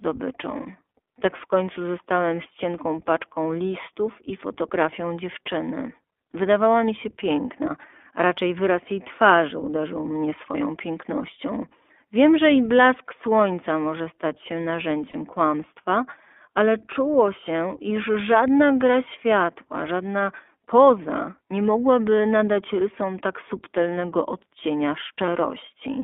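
iLBC codec, throughout the whole speech clip: the audio has passed through a narrowband VoIP coder that codes each 20 ms frame's excitation independently, which fits iLBC's 15.2 kbps mode. The band runs only from about 250 Hz to 3.5 kHz, so the sound is thin and boxy with no air on top, and the coding damage is plainly audible as a rough, slightly synthetic grain over every syllable.

Lost iLBC frames, at 10.52 s after "jej twarzy uderzył mnie", at 15.10 to 15.16 s between "słońca może stać się" and "kłamstwa ale czuło się", and at 25.26 s after "rysom tak subtelnego odcienia": packets went missing and the decoder filled the holes by repeating the last pitch cycle blended with noise. The gaps last 20, 40 and 20 ms, fitting one, two and one lost frame. Each sounds like a brief held, faintly buzzy vowel, and the voice is right again almost immediately because every frame decodes on its own.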